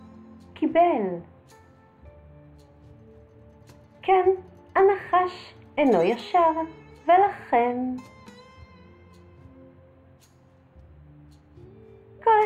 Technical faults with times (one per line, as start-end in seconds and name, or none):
none